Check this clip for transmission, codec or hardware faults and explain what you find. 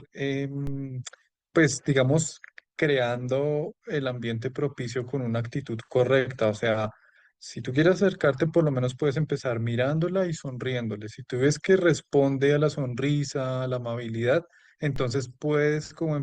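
One hardware-type fault stands out: a DC step. At 0.67 s a low thump or click sounds beneath the speech, and a second thump follows at 14.96 s as the waveform's zero line returns. In between, a baseline offset of about −25 dBFS holds steady while the speech carries on unchanged.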